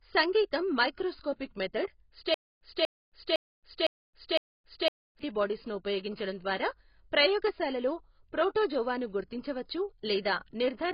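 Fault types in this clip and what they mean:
Low-bitrate audio saved at a high bitrate: The sound carries heavy coding artefacts and nothing above about 5.2 kHz, yet it sits in a high-bitrate MP3 file. The likely cause is a low-bitrate first encoding, perhaps AAC, that was later re-encoded generously. The extra bitrate restores nothing. Unlike a genuinely low-bitrate file, the size and bitrate look healthy while the dull, smeared sound and the hard ceiling near 5.2 kHz reveal the earlier damage.
Stutter with silent gaps: From 2.34 s to 5.19 s, the same 240 ms fragment of speech repeats five times, each followed by about 268 ms of digital silence, for an even 508 ms cycle. The likely cause is a stalled player or stream replaying its last fragment on each retry and then running empty. Unlike a simple dropout, the silence alternates with an identical repeated burst, and the speech that belonged in that stretch is lost.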